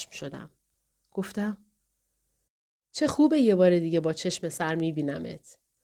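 Nothing is technically wrong with this speech recording.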